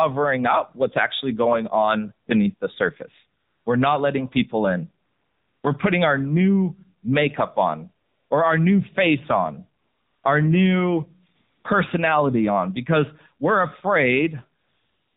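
Throughout the speech, the AMR narrowband mobile codec is plainly audible. The voice sounds buzzy and synthetic, which fits a low mode around 7.4 kbps. On a spectrogram everything stops at a hard ceiling of 4 kHz, because the sound was carried at 8 kHz sampling and rebuilt from a vocal-tract model fed with sparse pulses, so formants look smeared and harmonics blur into each other.

AMR comfort noise replaces the real background six times, at 3.40–3.66 s, at 5.06–5.64 s after "not letting people in", at 8.06–8.30 s, at 9.82–10.24 s between "our new face on" and "our new", at 11.36–11.64 s between "face on our new" and "personality on because we're", and from 14.60 s to the end. No speech frames arrived during these gaps, which last 240 to 580 ms, so the receiver generated smooth, steady noise. On a spectrogram each gap shows as a flat, even haze with hard edges, and the waveform switches abruptly into a uniform, low-level band.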